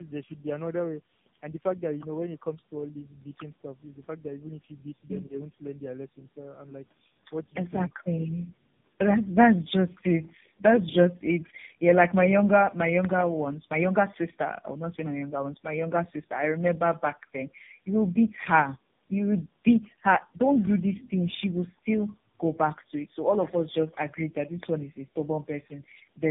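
Tandem speech coding runs through the whole clip. The speech has the rough, muffled, warbling quality of several low-rate speech codecs in a row, and nothing is present above 3.7 kHz. The layered artefacts point to about three coders in sequence, consistent with AMR-NB, then GSM full rate, then AMR-NB again, joined by 64 kbit/s G.711 links. Each stage re-encodes the previous stage's errors, so the damage accumulates.

At 7.43 to 7.53 s, about 100 ms of the speech is pulled down by roughly 10 dB at its deepest before recovering. This is speech suppressed in double talk. The likely cause is that both sides were talking at once and the echo canceller could not tell the near talker from loudspeaker echo, so it attenuated everything briefly.

At 20.6 to 20.69 s, an echo leak is audible as a faint, delayed copy of the speech, about 25 dB below it and trailing by 155 ms. It probably comes from a loudspeaker on one side whose echo canceller left some of the microphone pickup in the returned signal, so a short scrap of the voice comes back.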